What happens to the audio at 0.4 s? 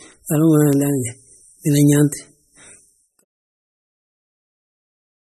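At 0.4 s the speech sounds watery and swirly, with nothing above 13.2 kHz, and this runs through the whole clip. The likely cause is heavy MP3 compression, which fits a bitrate around 32 kbps: short on bits, the encoder cuts the treble and drops weak frequency lines that flicker between frames.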